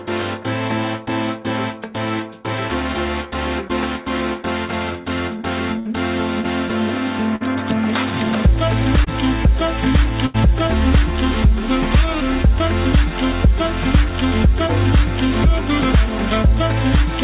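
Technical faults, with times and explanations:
3.68–3.71 s and 9.04–9.08 s, short concealed packet loss: about 20 ms of audio arrived too late each time, and the receiver stretched the preceding sound over the hole for 13 and 19 ms before blending back, leaving a brief smear or wobble.
5.79–5.88 s, 7.36–7.43 s and 10.26–10.36 s, burst of packet loss: about 60, 40 and 80 ms went missing in turn. The receiver extended and faded the last sound, so each gap becomes a short held buzz or fading hiss, and the audio then jumps ahead.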